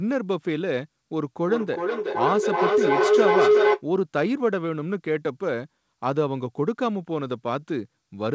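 A speech clip carried over a call link, with nothing above 8 kHz as a wideband codec such as G.722 would leave it. Feedback howl runs from 1.47 to 3.84 s. A tone near 400 Hz builds to about 6 dB above the speech. The loop repeats roughly every 400 ms. Each trip from loudspeaker back to microphone added gain, so the loop grew instead of decaying.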